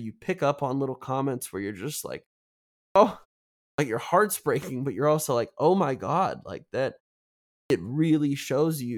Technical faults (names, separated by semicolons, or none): clipped start after a pause